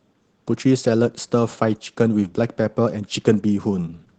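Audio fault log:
throughout: Opus voice compression. The speech sounds noticeably hoarse and slightly robotic. This fits Opus hybrid mode at roughly 16 kbps, where the SILK layer codes the excitation coarsely and a thin CELT layer carries everything above 8 kHz.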